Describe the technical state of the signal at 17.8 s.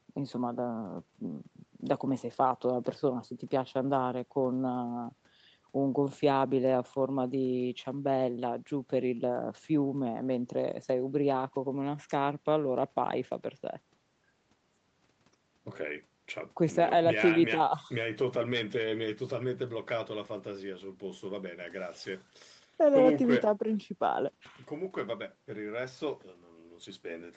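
At 17.8 s the audio is intact, with no fault in the speech at that moment.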